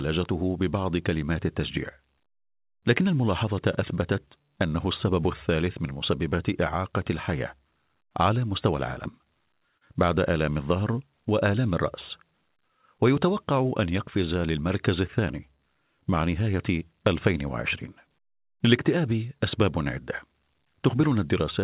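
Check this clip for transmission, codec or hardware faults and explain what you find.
One transmission fault stands out: repeated stalls, a stutter, between 9.12 and 9.83 s. In that stretch the sound hitches five times. Packets were arriving late, so the jitter buffer ran dry at each hitch and the receiver stretched the last sound to fill the wait. About 78 ms is filled this way, the longest hold about 40 ms. Unlike packet-loss dropouts, nothing is cut out. The audio drags and resumes where it left off.

The call's G.711 A-law coding is audible as its usual coding noise and a band limit, with nothing above 4 kHz.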